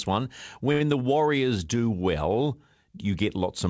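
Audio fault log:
0.72–0.82 s, short stall from a late packet: one sound drags on an extra 82 ms, stretched while the emptied jitter buffer awaited the packet; nothing is lost.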